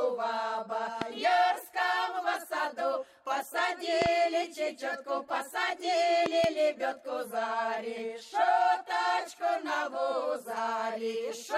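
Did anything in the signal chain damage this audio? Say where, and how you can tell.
Yes. Loud pops, each rising roughly 20 dB above the sound, occur at 1.02–1.04 s (one pop), 4.02–4.08 s and 6.26–6.46 s (two each), with the audio continuing underneath. These are likely analogue-stage voltage steps, from a plug, switch or static, which downstream circuits shape into pulses.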